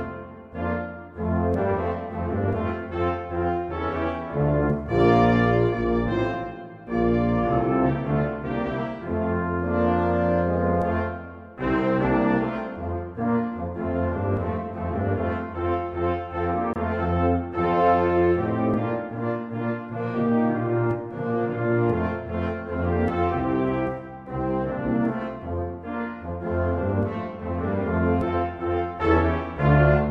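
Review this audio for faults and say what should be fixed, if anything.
A brief dropout of about 27 ms opens at 16.73 s and closes at 16.76 s, with smeared edges, before the sound resumes where it stopped. This is a gap at a join of encoded pieces: separately encoded segments were butted together with each run's start delay and last-frame padding left in. To prevent it, trim the encoder delay and padding before joining, or encode the whole programme in one pass.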